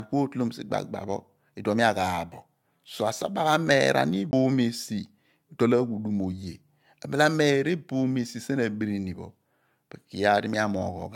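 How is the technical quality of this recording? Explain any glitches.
The speech carries two faults: a smeared, lossy coloration throughout and one brief jump in playback.

Throughout the clip, the speech sounds swirly and hollow, with blurred attacks and nothing above 17 kHz. This is likely generation loss from AAC-LC being re-encoded about four times, with each pass adding fresh quantisation noise on a shifted frame grid. The damage is worse than one encode at the rate it points to, around 96 kbit/s, would cause.

At 4.31 to 4.33 s, a CD skip produces a very brief mute, and playback then resumes from a different point. A laser jump on the disc explains this: the material skips forward or back, whereas a plain dropout would leave only a gap.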